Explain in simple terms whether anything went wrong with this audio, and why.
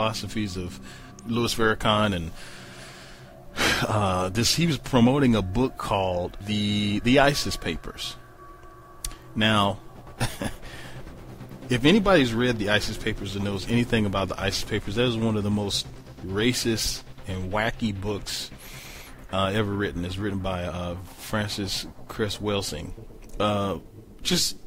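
Nothing went wrong here.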